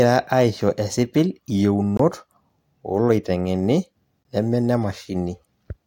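At 1.97 to 1.99 s and again at 4.23 to 4.25 s the speech drops into a block of digital silence about 21 ms long, which fits a 1024-sample buffer left unfilled. The hard cut to silence and back has no fade, unlike a faded dropout.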